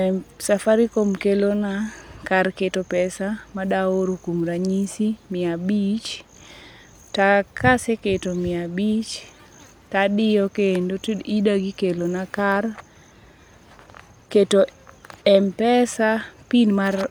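No technical faults can be heard anywhere in the recording. Nothing interrupts or alters the sound at any point.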